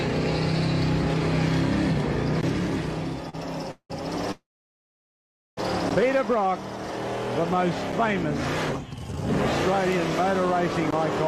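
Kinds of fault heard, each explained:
Short stall from a late packet: At 3.29 s one sound is held a little too long, with a faint buzzy smear. A packet arrived late and the jitter buffer ran dry. The receiver stretched the last sound by about 38 ms until the packet came, then carried on from the same point. Nothing is skipped. Everything after this point simply plays about 38 ms later than it should.
Call audio freeze: The sound halts twice, at 3.71 to 3.92 s and at 4.32 to 5.59 s. Each time the last sound trails on as a fading buzz and then drops to silence. That silence lasts about 90 ms the first time and about 1.15 s the second. The audio then resumes exactly where it stopped, with nothing lost. The likely cause is packets held up in transit, which emptied the jitter buffer. These gaps add about 184 ms and about 1.26 s of delay.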